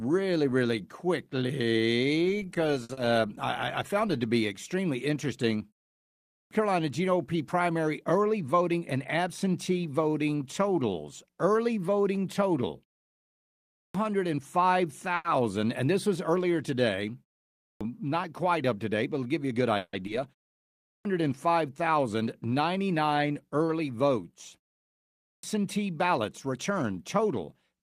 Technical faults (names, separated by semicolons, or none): short stall from a late packet; short concealed packet loss; clipped start after a pause; jitter buffer speed-up; call audio freeze; skip ahead